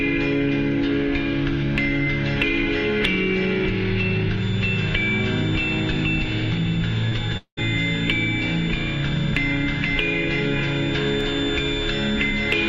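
A recording of everyday sounds with two transmission faults close together. At 7.09 to 7.13 s a short concealed packet loss leaves a brief smear: about 20 ms of audio failed to arrive, and the receiver bridged it by extending the preceding sound for 17 ms before blending back. From 7.37 to 7.59 s the sound continues as a synthetic tail that fades, followed by roughly 90 ms of silence before the real audio returns with about 200 ms missing. This is likely a long network dropout, with the receiver's concealment covering the gap.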